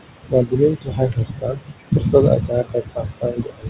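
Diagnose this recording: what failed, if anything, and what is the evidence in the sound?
The failure sits in the call processing stage, at the noise suppressor. It pulls the steady room noise, which sits about 12 dB under the speech, down by about 21 dB across the whole clip. The gain is set frame by frame, so the floor dips in the gaps and comes back up under the speech. The noise is pumped with the speech rather than present as a constant hiss, which sets these noise suppressor artifacts apart from plain room noise.

The suppressor also cuts speech, from 0.05 to 2.14 s and again from 2.37 to 3.69 s. In the first span, roughly one and a half seconds is affected. Soft consonants and word tails are pulled down by as much as about 22 dB, so they sound swallowed. The loss follows the noise-gain decisions and the level falls in spectral bands, not all at once. That rules out a dropout or packet loss, which would leave silence or hard gaps. 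The G.711 band limit at 4 kHz dulls the top end evenly and does not explain these fades.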